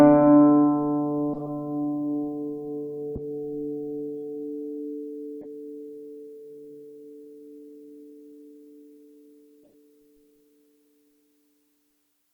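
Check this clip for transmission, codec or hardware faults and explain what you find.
There are four corrupt frame decoded glitches in the music, at 1.34–1.49 s, 3.15–3.20 s, 5.41–5.46 s and 9.63–9.74 s. In each one, the decoder played damaged frames, so misread gains and codes sprayed energy into the wrong frequencies. That comes through as brief chirpy noise bursts. The first and last span several frames, and the middle two only a few. The bursts peak around -20 dBFS early on, then fade to roughly -30 and -45 dBFS.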